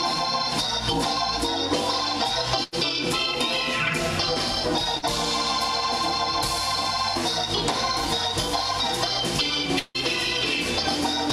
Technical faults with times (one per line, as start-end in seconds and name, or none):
2.63-2.74 burst of packet loss
4.98-5.05 short concealed packet loss
9.79-9.96 long network dropout